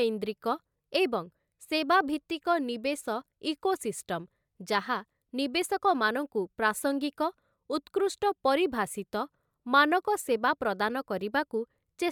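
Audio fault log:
No faults were found in this speech recording.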